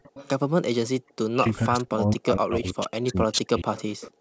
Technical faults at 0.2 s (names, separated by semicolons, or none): echo leak